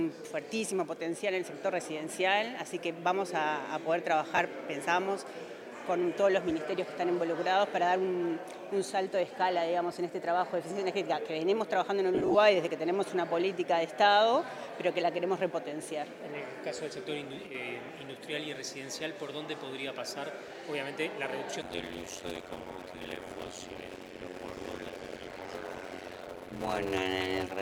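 At 4.36 s, lost LE Audio frames interrupt the Bluetooth link for about 22.5 ms, which points to three frames. The LC3 decoder covers the gap by replaying the last received spectrum with randomised signs, so the missing audio is replaced by a brief noisy smear. At 12.15 s the loss returns for about 0.2 s. About 112.5 ms of audio goes missing in short runs of around 20 ms at most, so the repeated concealment gives a stretch of broken, smeared texture.

At 17.47 s the level falls abruptly by about 6 dB for roughly 80 ms and then recovers. That is the size of drop a mono sum takes when one of two identical channels vanishes, so the likely cause is one channel dropping out of a stereo path for a moment. Apart from the lower level, nothing about the sound changes during the dip.

From 21.62 s to the end there is a block size mismatch (padded). One stage writes shorter blocks than the next reads, which fits 256-sample writes, and the remainder of each block is filled with zeros. 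Each block therefore carries a short silent gap, heard as a buzz at 91.9 Hz. The audio also plays at 0.533 times its proper speed, just over half, while its timbre is kept.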